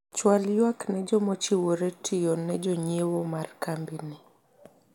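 No technical faults are audible anywhere in the recording.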